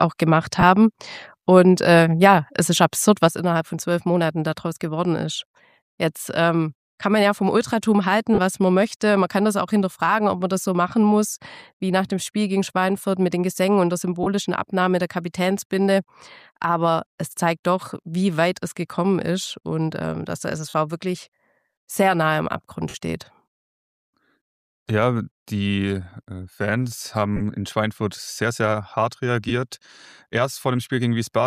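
The first hiccup comes at 0.60 s, about 22 ms of lost LE Audio frames, which fits three 7.5 ms frames going missing over the Bluetooth link. The LC3 decoder covers the gap by replaying the last spectrum with scrambled phase, so instead of a click you get a brief noisy smear where any tonal content should be.

At 3.28 s the level drops abruptly by about 6 dB and stays down to the end. The likely cause is one channel dropping out before the mono sum, so anything that lived only in that channel vanishes too.

The lost frames keep coming after that, at 8.34 s (about 38 ms), 14.23 s (30 ms), 20.69 s (45 ms), 22.89 s (about 53 ms, the longest), 27.36 s (about 38 ms) and 29.49 s (15 ms). Each is that same short, hissy blur. The longer ones begin to fade as the concealment gives up, over a light layer of codec compression.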